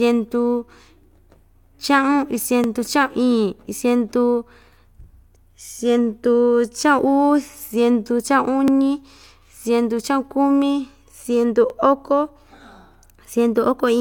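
Overlapping chunks occur at 2.64, 5.66, 8.68 and 11.70 s in this speech. Each lasts about 20 ms. The audio was handled in 3-second blocks, and each new block began 20 ms before the previous one finished, so a 20 ms slice plays twice at every join. The joins fall roughly every three seconds, giving a brief click or stutter at each one, as though the speech briefly catches on itself.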